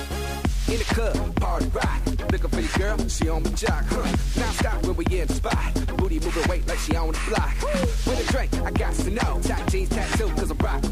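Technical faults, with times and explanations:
Throughout, low bit depth without dither: the audio sits on a coarse grid, which fits a 7-bit signal likely truncated rather than dithered. The rounding error tracks the sound, so quiet passages go gritty and grainy, with distortion roughly 30 dB below the signal.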